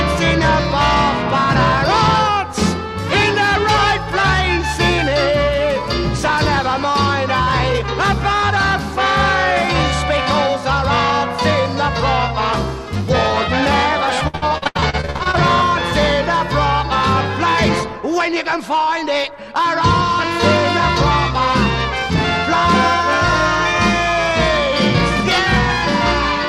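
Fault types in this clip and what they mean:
Repeated packet loss (robotic sound): fifteen quick gaps between 14.27 and 15.35 s, each up to 77 ms, patched by repeating sound, giving choppy texture unlike a single dropout.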